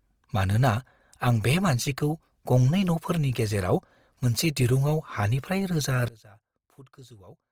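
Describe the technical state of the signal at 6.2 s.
At 6.2 s you're just past a sudden gain jump. Right after "दिरुंआव हानिफ्राय", at 6.08 s, the level falls by about 24 dB in a single step and stays down to the end of the clip. The speech and the background noise drop together, with no fade. That points to a gain change applied instantly, most likely a setting or bit shift switched in without a ramp, so the tail of the clip sits far quieter than the rest.

Under that, the Opus compression running through the whole clip is still there at 6.2 s, and it's plainly audible. The bandwidth stays full, but the speech comes out rough and grainy. That fits the encoder's music (CELT) mode at somewhere around 24 kbps. At that rate it keeps the energy of each band but runs short of bits for the detail, so it patches the gaps with folded or noise-like content, and clean tone turns noisy.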